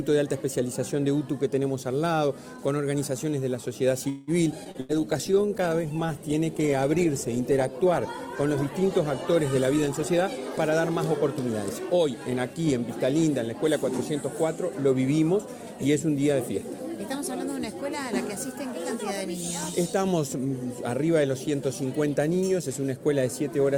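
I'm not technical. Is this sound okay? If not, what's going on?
No, the sound has several problems, mostly clustered between about 4 and 13 seconds.

At 4.09 to 4.31 s there is a call audio freeze, likely caused by delayed network data. The sound stalls into a brief fading buzz or hiss, then resumes where it stopped.

At 4.52 and 4.64 s, playback skips ahead. Each time the system discards a small chunk, under a tenth of a second, and the sound jumps forward with almost no gap.

From 4.54 to 11.39 s there is a call bitrate drop. The connection gets squeezed, so the sound is coded far more coarsely and turns rougher and duller until it recovers.

At 4.71 to 4.77 s there is a short concealed packet loss. A tiny piece never arrives, and the system patches it by extending the previous sound, leaving a brief smear.

At 4.80 to 4.92 s there is a burst of packet loss. Several pieces are lost in a row, so the sound becomes a short fading buzz or hiss before continuing slightly further on.

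From 4.93 to 6.07 s there is a jitter buffer slow-down. The system stretches the sound to rebuild its reserve, so everything plays about 10% slower at the same pitch.

From 9.73 to 12.73 s there is a jitter buffer speed-up. The system trims small slivers to reduce delay, so the sound runs about 6% faster and feels slightly hurried.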